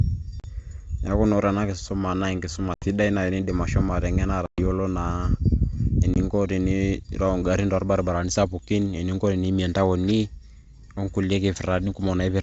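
Speech over a G.722 wideband call suffers packet loss on an ADPCM call. Lost packets leave hard-edged silent gaps at 0.40–0.48, 2.74–2.86, 4.46–4.63 and 6.14–6.16 s, about 40, 80, 120 and 20 ms of missing audio. After each gap, the decoder's predictor and step size are out of step with the sender, so the sound resumes with brief, slight distortion.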